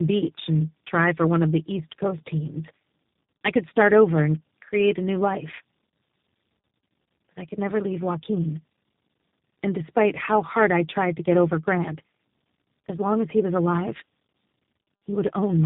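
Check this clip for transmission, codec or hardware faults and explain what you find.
One transmission fault runs through the whole clip: tandem speech coding. The speech sounds rough, muffled and warbly, with nothing above 3.8 kHz. This suggests about four successive speech codecs, likely ending in G.729A, each re-encoding the previous stage's degraded output so the artefacts stack.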